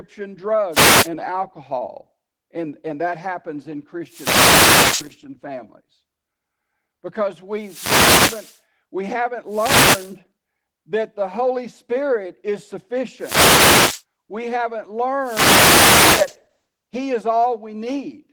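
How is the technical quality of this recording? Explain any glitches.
The recording has two clear problems: constant low-bitrate codec damage and repeated bursts of radio static.

Opus voice compression runs throughout the speech. Linear-prediction coding below 8 kHz, with a thin layer for the band above, has too few bits for the excitation, which fits a rate around 16 kbps. The result is a plainly audible hoarse, slightly robotic roughness.

Wireless microphone noise hits occur at 0.71–1.09 s, 4.05–5.16 s (just after "and that happens in"), 7.57–8.59 s (just before "we haven't"), 9.48–10.17 s (just after "we haven't"), 13.18–14.03 s and 15.20–16.36 s. In each, the FM radio signal fades as reflections cancel, and receiver noise swells into a swish of static.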